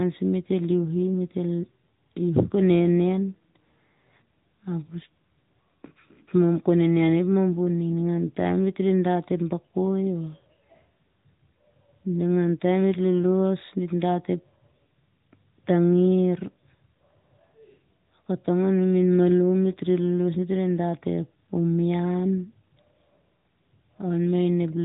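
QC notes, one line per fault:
Throughout, AMR narrowband mobile codec: the speech has that phone-call sound, with everything above about 3.8 kHz gone, so sibilants and airiness are dulled. The damage is plainly audible: a buzzy, synthetic edge on the speech, because the codec rebuilds each 20 ms frame from a vocal-tract model and a handful of pulses rather than the real waveform. The amount of artefacting fits a mid-rate AMR-NB mode around 10 kbps.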